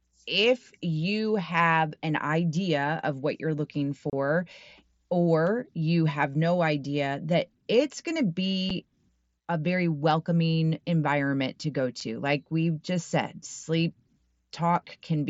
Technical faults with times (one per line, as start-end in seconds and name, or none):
4.10-4.13 unconcealed Bluetooth headset packet loss
8.70 unconcealed Bluetooth headset packet loss
12.00 unconcealed Bluetooth headset packet loss